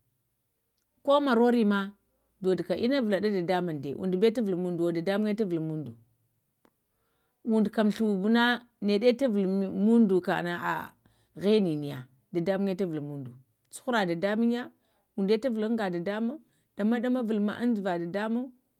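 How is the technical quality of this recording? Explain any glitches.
Nothing in the recording stood out as a technical problem on listening.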